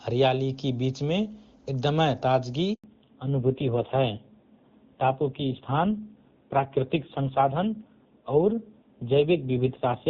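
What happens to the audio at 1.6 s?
At 1.6 s the speech plays through intact, with no dropout, glitch or distortion, and the AMR wideband (HD Voice) coding it passes through leaves at most faint traces of its processing there.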